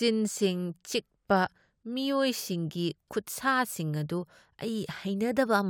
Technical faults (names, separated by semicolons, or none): none